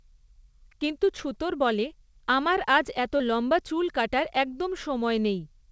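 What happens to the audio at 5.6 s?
Nothing goes wrong at 5.6 s: the speech there comes through the call path intact, with no dropout, glitch or other fault.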